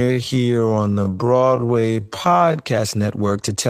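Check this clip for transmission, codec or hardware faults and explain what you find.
One fault stands out: a time-stretched section from 0.00 to 2.58 s, where the speech runs at about 0.535 times its natural pace, close to half speed, while its pitch stays put. It likely comes from software lengthening the audio by repeating short slices. The result drags. On a spectrogram, harmonics keep their spacing but syllables are drawn out; the waveform shows elongated envelopes with a repeating grain pattern.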